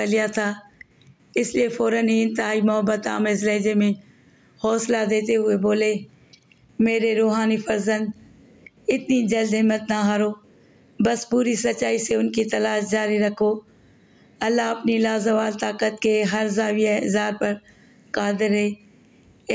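Gain pumping runs through the whole clip. The level swings by around 10 dB. Loud and quiet passages sit unnaturally close together, giving a squashed, flattened character. The likely cause is an input gain set far too high, with a fast limiter or compressor clamping down on each peak. The call's microphone processing, with nothing above 8 kHz, is heard alongside it.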